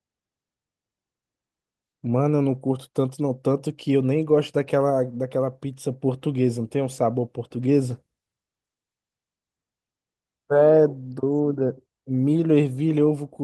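Nothing in the recording stood out as a technical fault on listening.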